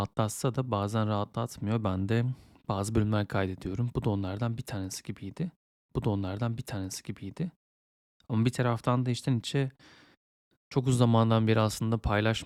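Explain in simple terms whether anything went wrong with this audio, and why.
Stream segment repeated, from about 5.89 s to 7.89 s: two seconds of the speech play a second time. The player fetched or queued the same chunk of the stream twice, so when it reached the end of that chunk, it jumped back and played it again instead of moving on. You can hear a small blip at the jump back, and the clip runs two seconds longer because of the repeat.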